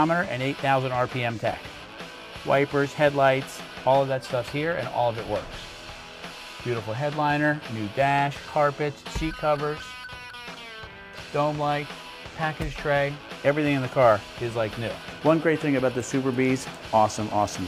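At 1.51 to 1.54 s, chunks play out of order. One 10 ms chunk arrives two chunks late and sounds after the ones meant to follow it. No audio is missing, but the sequence is scrambled, leaving three hard joins and a brief jumbled moment.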